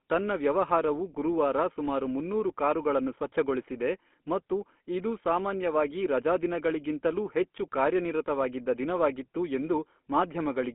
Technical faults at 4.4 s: GSM full-rate codec

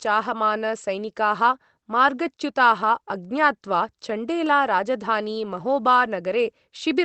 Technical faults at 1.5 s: none

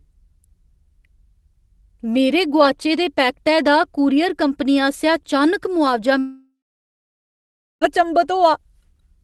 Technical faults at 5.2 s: none

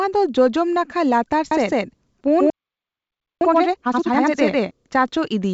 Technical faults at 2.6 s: doubled audio track; playback stall

